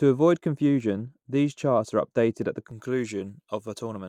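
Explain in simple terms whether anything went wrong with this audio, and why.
A couple of things went wrong here. For the first 2.7 seconds or so, the speech sounds dull and muffled, as if someone laid a blanket over the speaker. That's de-emphasis applied wrongly. A treble cut meant to undo a high-frequency boost got applied to audio that never had the boost, or got applied twice, so the crisp top end of the voice slopes away. After about 2.7 seconds the brightness comes back.

There are also two sharp little clicks, one at 0.80 seconds and another at 3.29 seconds. These are likely dropped samples: a tiny sliver of audio, a fraction of a millisecond, went missing, so the waveform suddenly jumps from one point to a later one. The gap is far too short to lose any of the speech, but that abrupt jump is what you hear as a tick.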